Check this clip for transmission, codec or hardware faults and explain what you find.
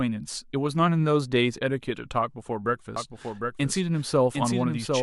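A doubled audio track begins at 2.96 s and runs to the end of the clip. Most likely the speech was picked up a second time through a slower path, or an edit left two unaligned copies, so a full-band duplicate trails the original by roughly 0.7 s at about 5 dB lower. From that point every phrase is repeated as a slightly quieter echo with no reverb tail or room colouring, and the copy switches in abruptly rather than fading up.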